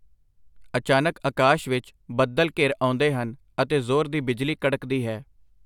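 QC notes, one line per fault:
No faults were found in this speech clip.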